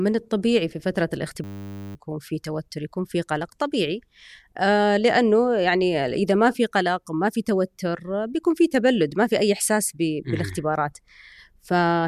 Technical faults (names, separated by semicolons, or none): system hang loop